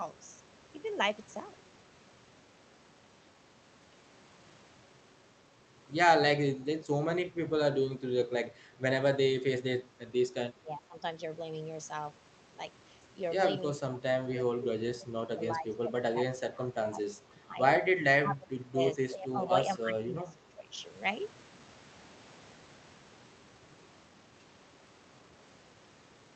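From 6.52 to 7.53 s, then 7.93 to 8.05, 10.53 to 10.96, 13.79 to 15.42, 15.58 to 17.59, 18.22 to 18.79, 18.95 to 19.52 and 19.77 to 20.73 s, the speech sinks, gently at first and by up to about 25 dB later. That's likely speech suppressed in double talk: with both ends talking, the echo canceller couldn't separate this talker from the loudspeaker echo and turned both down.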